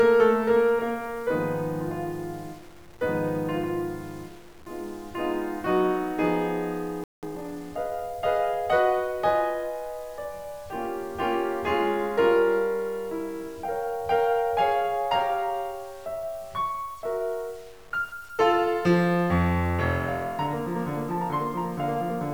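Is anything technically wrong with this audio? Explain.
Yes, there are three problems in this music clip.

Low bit depth without dither runs through the whole clip. The music is likely truncated to very few bits, around 7, with no dither, so the rounding error tracks the signal. Quiet passages sound grainy and gritty, with distortion sitting roughly 30 dB below the music. On a waveform, low-level sections show visible stair-steps. On a spectrogram, the noise floor rises and falls with the music instead of staying flat.

A playback stall occurs at 7.04 s. The music cuts out for about 190 ms, until 7.23 s, and then resumes. The likely cause is a player that ran dry of data or had its thread blocked. The waveform shows a flat, silent gap, and the spectrogram shows a clean vertical blank band across all frequencies.

Time-compressed catch-up follows from 7.23 to 7.61 s. To recover the lost time, the player drops and cross-fades small slices, so the music plays about 1.5 times faster at unchanged pitch. 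Harmonics on the spectrogram stay at the same frequencies, but onsets crowd closer together.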